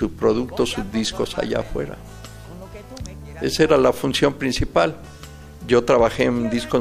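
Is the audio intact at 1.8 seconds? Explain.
No, GSM phone buzz runs from 1.65 to 2.95 s: a nearby phone's 217 Hz call bursts are rectified into a steady raspy buzz about 32 dB down, appearing on a spectrogram as evenly spaced harmonic lines.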